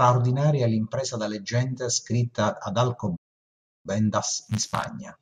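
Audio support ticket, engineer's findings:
Playback stall, 3.16 to 3.86 s. Speech cuts out mid-flow, 684 ms of dead silence, then resumes. Likely output buffer underrun or blocked player thread starving the audio device until data arrives again.

Time-compressed catch-up, 3.86 s to end of clip. Speech runs about 1.1x fast at unchanged pitch. Player trimming the post-stall backlog by dropping short segments and cross-fading the joins.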